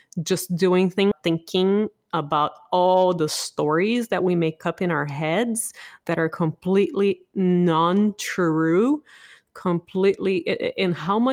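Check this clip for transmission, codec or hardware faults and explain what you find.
There are two network-side faults here, both packed into the first couple of seconds of this speech clip.

First, a skip ahead right after "just doing", at about 1.11 to 1.13 s. Somewhere around 0.7 s of audio never got played. It was either lost in transit or thrown out when the jitter buffer overflowed while later packets were already queued. Nothing fills the hole, so playback just lurches forward and the two sides butt together almost seamlessly. You hear a sudden jump in the sentence rather than a gap.

Right after that, from about 1.27 to 2.35 s, there's a jitter buffer speed-up, ending just before "all the stories that". The buffer was sitting on more audio than it wanted, the way it does when delayed packets land in a bunch. To claw back the delay, the receiver kept snipping out tiny pitch-period-sized slices, roughly 150 ms in total. 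Playback runs at about 111% speed with the pitch unchanged, so that stretch sounds rushed.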